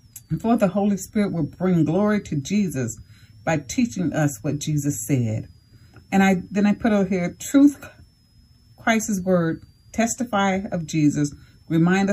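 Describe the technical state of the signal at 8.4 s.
At 8.4 s a switching supply whistle sits under the sound, as it does for the whole clip. A switching power supply is cycling at a rate low enough to be heard, or two supplies are beating against each other. The result is a thin, high whistle. Its pitch wanders between about 4.5 kHz and 5.7 kHz, centred near 5 kHz. It is faint, roughly 45 dB below the signal.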